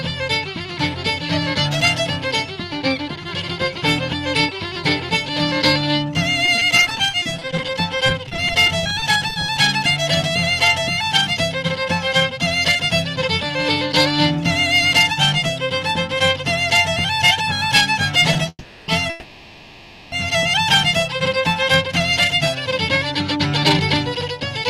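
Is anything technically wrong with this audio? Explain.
Yes, there are three kinds of fault.

From 6.45 to 9.58 s the sound turns choppy and robotic, with dozens of holes up to 30 ms long. This is repeated packet loss: each missing piece is patched by stretching the previous sound, but about 0.48 s of audio is still gone.

At 18.49 to 18.89 s, and again from 19.10 to 20.13 s, the audio stalls into a fading buzz before picking up where it stopped. The first stall ends in 30 ms of silence. These are call audio freezes, likely from held-up packets draining the jitter buffer. Nothing is lost, but 0.39 s and 1.02 s of delay are added.

Between 21.63 and 22.70 s the sound runs hurried at 105% speed while keeping its pitch. This is a jitter buffer speed-up: the receiver trims tiny pitch-period slices, about a twentieth of a second in total, to cut the built-up delay.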